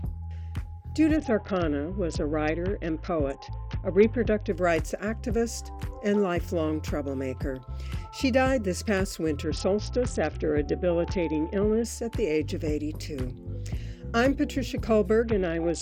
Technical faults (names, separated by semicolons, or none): Bluetooth SBC bit pool drop